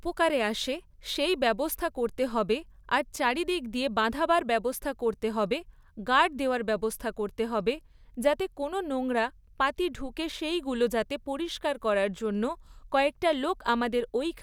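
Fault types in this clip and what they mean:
No fault types are present in this clip.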